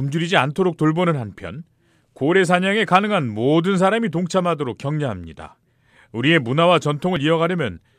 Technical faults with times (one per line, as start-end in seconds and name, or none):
5.63 dropped buffer (overrun)
7.16 dropped buffer (overrun)